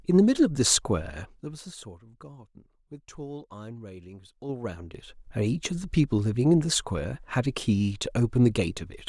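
From 1.02 to 2.05 s the speech level falls by roughly 20 dB in unsmoothed 3 dB steps, about seven per second. Each jump leaves a small click, giving audible zipper noise. The same ticking returns from 4.27 to 5.29 s as the level climbs back.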